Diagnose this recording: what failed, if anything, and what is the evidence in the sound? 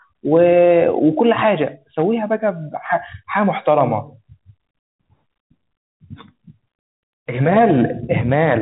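Nothing failed: the speech comes through its G.711 telephone coding as expected, with no fault evident in the sound.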